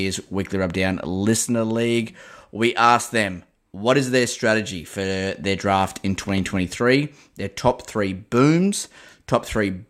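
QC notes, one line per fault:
6.29–6.40 s: loud pop, two pops after "for their draft in", about 5 dB above the speech, which continues underneath; likely a voltage spike entering the chain.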